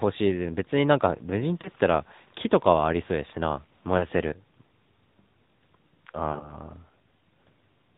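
AMR narrowband mobile codec damage runs through the whole of this speech clip. Nothing above 4 kHz survives, and the voice has a plainly audible buzzy, synthetic edge. The speech is rebuilt from a vocal-tract model excited by a few coded pulses per subframe rather than carried as a waveform, and the degree of roughness points to a mid-rate mode around 10.2 kbps. Lost AMR speech frames interrupt it at 1.62 to 1.69 s and 3.98 to 4.05 s, each a brief dip or warble that fits a single missing 20 ms frame. A longer drawn-out, fading stretch follows at 6.32 to 6.62 s, consistent with about 40 ms lost. In each case the decoder stood in for the corrupted frames by repeating the last good pitch and vocal-tract settings at falling gain, and the voice returns briefly weak or rough afterward.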